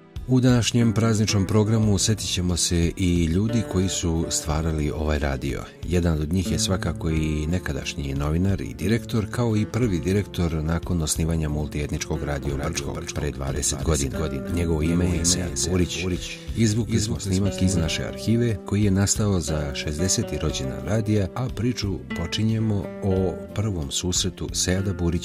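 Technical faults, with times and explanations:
12.45–17.85 s, doubled audio track: a second, full-band copy of the sound trails the original by roughly 0.3 s, a few dB quieter, with no decay or room colour, and it switches on and off abruptly, likely a second capture path or misaligned edit.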